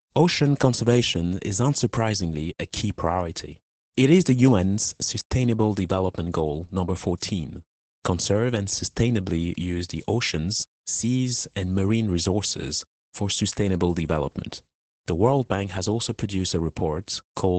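Speech throughout shows Opus voice compression: nothing above 9 kHz plus a hoarse, slightly robotic texture, fitting low-rate SILK coding rather than a plain low-pass filter.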